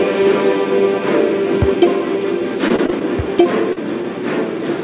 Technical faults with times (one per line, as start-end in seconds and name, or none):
2.68-3.03 repeated packet loss (robotic sound)
3.73-3.78 short concealed packet loss